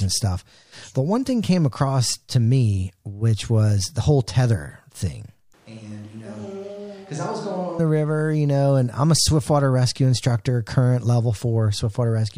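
Right after "the whole tether thing", at 5.54 s, the speech suddenly goes roomy and hollow, thinner in the bass, roughly 10 dB quieter, with room noise only about 25 dB below it. It snaps back at 7.79 s before "the river you know". That's likely a switch to a distant microphone, with the close mic dropping out.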